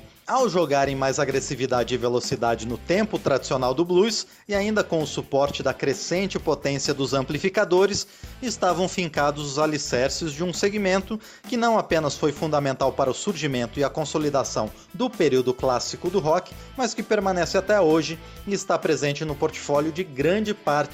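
No technical faults can be heard anywhere in the clip. Nothing in the audio calls for a timestamp or further comment.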